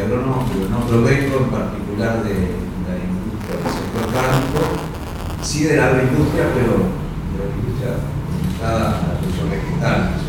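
From 3.40 s to 5.46 s the writer and reader of the playback ring buffer fall out of step and cross inside every period, which points to a 256-sample buffer. This is buffer tearing: each period carries a small slice of audio from roughly 10 ms earlier, spliced in with hard joins on both edges. The repeating splices produce a robotic buzz at 172 Hz that rides on the sound throughout that stretch, present wherever there is signal.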